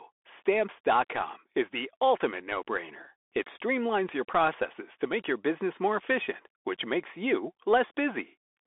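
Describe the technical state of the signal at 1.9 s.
At 1.9 s the speech carries the Bluetooth CVSD headset codec distortion that runs through the whole clip. One-bit delta coding, consistent with a 64 kbit/s stream, leaves a granular hiss and scratchy sibilants. A spectrogram shows energy confined to roughly 300 Hz–3.5 kHz and nothing above 3.8 kHz.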